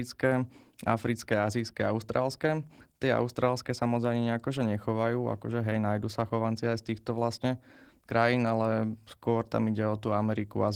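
Opus voice compression runs through the whole speech clip. The band reaches about 20.2 kHz, but the sound points to a low rate near 16 kbps in hybrid mode. Coarse excitation coding makes the voice plainly hoarse and slightly robotic.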